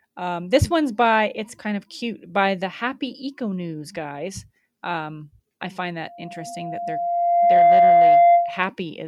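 A speech clip where, just after "I find", a loudspeaker feedback squeal at 694 Hz swells over roughly a second and a half, from 6.07 to 8.70 s, ending about 10 dB above the speech. Its steadily growing single pitch marks it as a runaway mic-speaker loop rather than a fixed interference tone.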